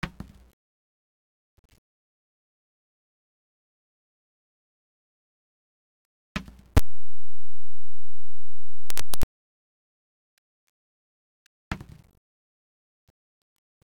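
From 6.77 s to 9.23 s the audio becomes loud, harsh distortion where quiet moments blare as loudly as peaks, likely signed and unsigned mixed up, flipping each 8-bit sample's top bit. Unlike clipping, every zero crossing leaps full range.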